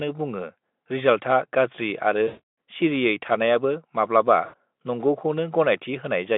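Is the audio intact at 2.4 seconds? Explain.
No, 2.4 s sits right at the tail of a VoIP packet loss concealed by the speech codec, running from 2.27 to 2.40 s after "बुङो रिजाल्थआ गाज्रि आरो". Packets dropped, so the decoder kept stretching its last pitch and filter at falling gain, giving a fading, buzzy or noisy smear.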